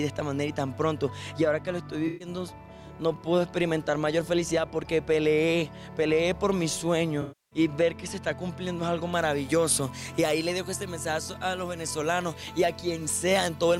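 At 2.07 s the sound briefly smears into a noisy, phasey patch until 2.28 s. This is AAC frame loss with concealment. Roughly 128 ms of coded audio went missing, which fits a run of about six frames, and the decoder rebuilt the gap from the last good spectrum with randomised phase. Unlike a plain dropout, there is no hard silence or click. The texture carries on blurred.

A longer loss of about 300 ms runs from 7.21 s to 7.59 s. Here the concealed sound decays toward silence and then fades back in. That gradual sag, rather than an abrupt cut, points to concealment giving up over a longer gap, which fits a run of about fourteen frames.

From 9.13 s to the end, pre-emphasis is left on. The treble is boosted by about 10 dB at 10 kHz relative to 1 kHz, and the matching de-emphasis was never applied. The rise is consistent with a 50 µs FM curve. The audio turns thin, bright and sibilant. This sets it apart from an ordinary treble shelf: the lift climbs smoothly and keeps rising through the top octaves, rather than flattening at a fixed boost.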